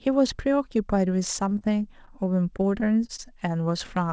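Speech with repeated packet loss (robotic sound) from 1.20 to 1.62 s and again from 2.57 to 3.20 s. Several brief holes, none longer than about 21 ms, are patched by extending the previous sound. This makes choppy speech with pieces missing. The call path's band stops at 8 kHz, which fits G.722.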